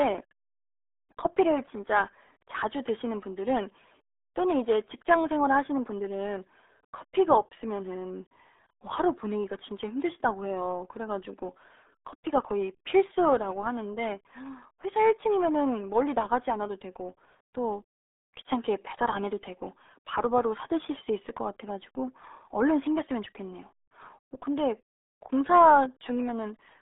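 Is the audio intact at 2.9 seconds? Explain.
No. At 2.9 s, as throughout the speech, the RealAudio 14.4 codec applies. The low-rate coding, which fits an 8 kbit/s dial-up stream, passes roughly 300 Hz to 3.7 kHz, so the sound is muffled and gargly. A spectrogram shows a flat ceiling with nothing above 3.8 kHz.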